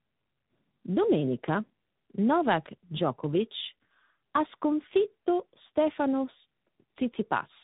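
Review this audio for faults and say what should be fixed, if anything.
Tandem speech coding runs throughout the clip: the speech has passed through two speech codecs in a row, which fits a low-rate AMR-NB leg followed by G.726. The second coder re-quantises the first coder's artefacts, so the speech sounds rough and warbly, with nothing above 3.8 kHz. To prevent it, keep one codec end to end through transcoder-free operation or codec negotiation.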